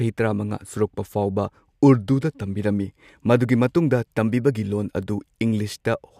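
Speech recording with no audible technical faults.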